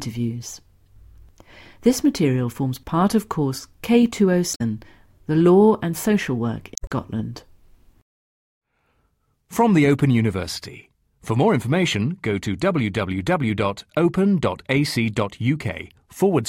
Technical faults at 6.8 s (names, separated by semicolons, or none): damaged data in a compressed stream